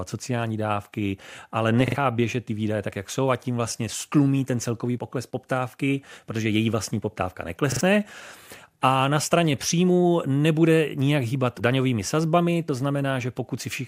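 At 1.88 s and again at 7.72 s the speech stutters with a repeated buffer: new audio arrived late, so the same piece of about 43 ms, which fits a 2048-sample buffer, played twice more, and roughly a tenth of a second of speech was skipped. Each event sounds like a brief mechanical stammer with hard joins. On a spectrogram three identical blocks sit side by side, split by sharp vertical edges; the waveform shows matching repeated segments.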